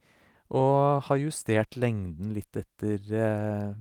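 No technical faults can be heard anywhere in this recording.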